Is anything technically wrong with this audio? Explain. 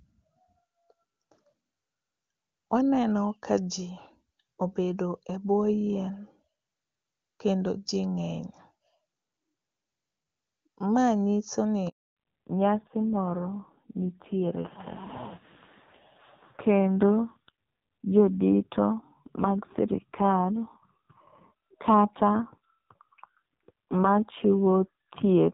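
Yes. A handover gap runs from 11.89 to 12.17 s, right after "nyiso ni". The call was passed between networks and no speech frames arrived during the switch, so the voice fades out within a few tens of milliseconds and leaves 280 ms of silence. It is a clean stop, not crackle or garbled frames, and the speech in that stretch is missing.

From 12.17 s to the end there is a fallback to narrowband. The speech, earlier clear HD Voice with content up to about 7 kHz, loses everything above 4 kHz and turns duller and raspier. That fits a drop from AMR-WB at 23.85 kbit/s to AMR-NB at 5.9 kbit/s. It differs from a simple low-pass filter because the coarse low-rate coding also adds roughness.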